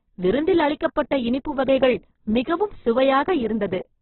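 A speech clip with heavy codec damage throughout, most likely Opus compression at a very low rate, around 8 kbps. Nothing sounds above about 4.1 kHz, and the audio turns rough and grainy rather than swirling, which sets it apart from MP3's watery spectral holes.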